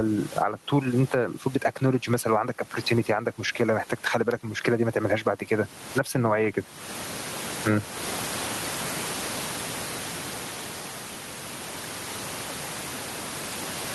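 Gain pumping runs through the whole speech clip: the background noise sits about 32 dB below the voice, and the gain swings by around 25 dB. The likely cause is input gain set far too high, with a fast limiter or compressor clamping down on each loud syllable and releasing in the gaps. Soft and loud passages end up pressed close together, so the speech sounds flattened.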